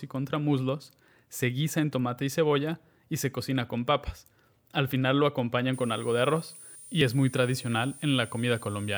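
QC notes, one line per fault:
5.73–8.97 s, switching supply whistle: a thin high whine comes in and rides to the end, wandering between about 8.9 and 9.4 kHz at roughly 20 dB under the speech. That's a switching supply running in an audible burst mode, its pitch shifting as the load changes.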